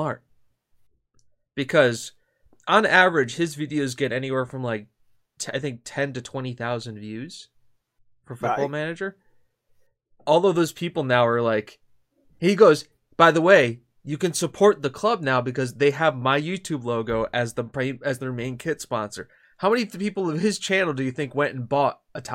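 No technical faults are audible.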